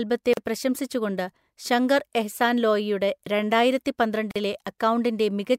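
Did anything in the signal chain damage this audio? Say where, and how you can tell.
Yes: gaps at a join of encoded pieces, at 0.33 s (about 38 ms, just before "പ്രശംസിച്ചുകൊണ്ട് ശങ്കർ എഹ്സാൻ ലോയിയുടെ") and 4.31 s (about 44 ms). This is a codec-stage fault. Separately encoded segments were spliced without trimming encoder delay and padding, so silence cuts into the speech before it resumes where it stopped.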